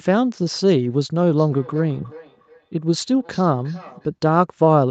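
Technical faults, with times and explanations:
1.36–4.12 s feedback echo between two devices: speech returns roughly every 0.4 s, thinner and ringing, about 22 dB down, a second device's playback re-captured, not room reverb.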